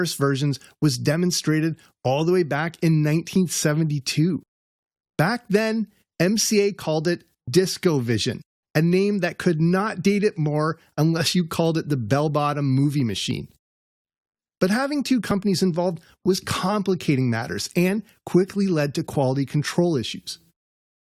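Tiny skips at 3.36 to 3.38, 9.33, 13.31 and 15.31 s come from overlap between stream segments: overlapping 2-second segment time stamps trimmed away real audio.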